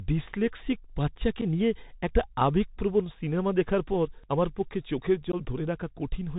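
The whole clip runs through a Bluetooth CVSD headset codec: narrowband speech with nothing above 4 kHz, scratchy s sounds and a granular hiss. Unconcealed Bluetooth headset packet loss then leaves abrupt holes: 7.5 ms at 1.41 s after "ডিসলেক্সিক বাচ্চাকে", 3.8 ms at 4.30 s after "আবেগপ্রবণ সিনেমা দেখার পর", and 15 ms from 5.32 to 5.35 s after "পর আমার পক্ষে চোখের". Each hole sounds like one to a few dropped packets.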